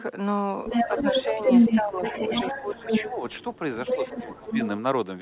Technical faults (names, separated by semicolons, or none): other side's voice leaking through; speech suppressed in double talk